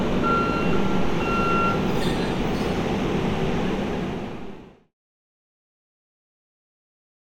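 No technical faults can be heard in this audio. The sound fades out smoothly from around 3.5 s and reaches silence at 4.95 s, with no click or hard edge.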